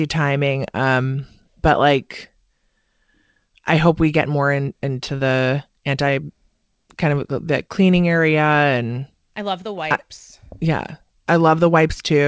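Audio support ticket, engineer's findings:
No audible faults found.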